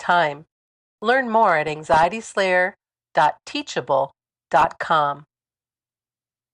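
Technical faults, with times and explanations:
1.68–2.10 s (just after "more at"), 4.51–4.65 s and 6.19–6.34 s, DAB burbling: bit errors of around half a percent get past error correction, so wrong samples put short blips of noise into single sub-bands over the speech.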